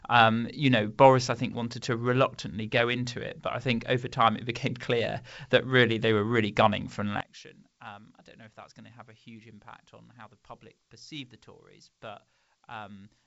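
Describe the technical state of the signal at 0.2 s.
At 0.2 s the speech is intact, carried cleanly by G.722 wideband telephone coding at 64 kbit/s, with nothing above about 7.7 kHz.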